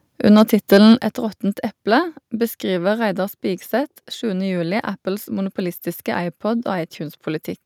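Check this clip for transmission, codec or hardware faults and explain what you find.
Two faults show up in the speech, one right after the other.

From 0.38 to 0.93 s there is microphone overload. The loudest syllables take on a harsh, crackly edge. The likely cause is input gain set about 4 dB too hot, so a small fraction of peaks hit the converter's ceiling. The waveform shows flat-topped peaks, and the spectrogram shows broadband splatter above the voice's harmonics.

At 1.02 s the microphone volume is stepped down. Voice and background both drop suddenly by about 6 dB, most likely because call software reacted to the preceding distorted peaks by lowering input gain. On the waveform the envelope steps down abruptly, and on the spectrogram everything dims at once along a sharp vertical boundary.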